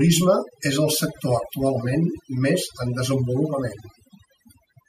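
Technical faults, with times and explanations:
Throughout, overdone noise removal: an over-aggressive noise reducer mutes bands near its noise estimate, leaving near-silent gaps with twinkling specks and quiet parts of the speech cut away.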